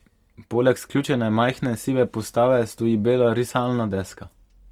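From start to end, the speech carries plainly audible coding damage. Tonal parts sound rough and grainy, with a noisy texture where clean harmonics should be. The band stays full, extending to 20.1 kHz with nothing above. This points to Opus compression in its music (CELT) mode, likely at a rate near 24 kbps. At that rate, bands short of bits are filled by folding lower bands or by injecting noise, rather than being left empty.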